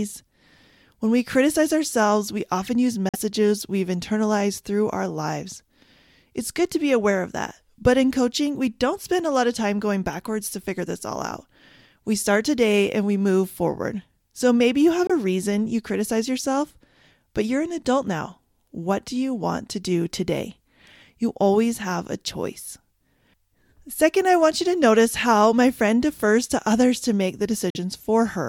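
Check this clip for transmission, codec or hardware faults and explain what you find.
Yes, the speech has three brief holes. These are Bluetooth dropouts at 3.09–3.16 s, 15.07–15.11 s and 27.70–27.77 s. Each is likely caused by packets reaching the headphones too late and being discarded. The result is sharp silences of about 46, 23 and 46 ms, after which the speech resumes as though it had kept playing.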